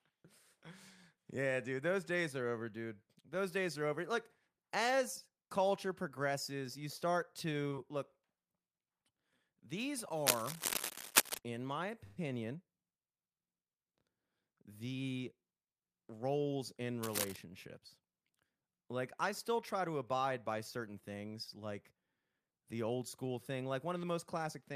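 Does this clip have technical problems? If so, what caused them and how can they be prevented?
Yes. From 10.26 to 11.39 s and again from 17.02 to 17.36 s there's cable scratch noise, harsh rustly bursts a bit louder than the speech the first time and about level with it the second. It's likely a worn connector or lead being moved, so contact resistance jumps around. Swap or reseat that cable and keep it from getting tugged.

At 12.04 to 12.18 s there's a call audio freeze: the sound stretches into a fading buzz for about 121 ms, then picks up where it left off with nothing lost. Likely delayed packets emptied the jitter buffer. A steadier connection or a slightly deeper buffer helps.

From 14.80 to 15.67 s there's a jitter buffer speed-up. The speech runs about 10% fast at the same pitch, as the receiver trims roughly a tenth of a second of short chunks to catch up after a backlog. Smoother network delivery stops that pile-up forming.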